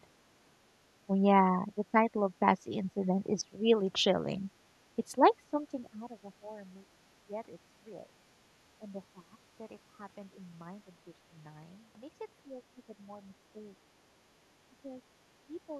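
From 1.07 to 6.56 s, then at 7.28–8.05, 8.8–9.35, 10.87–11.34, 12.46–13.68, 14.83–14.94 and 15.48–15.79 s, the speech dips and breaks up, by up to about 15 dB. This is speech suppressed in double talk, likely an echo canceller treating the near talker as echo.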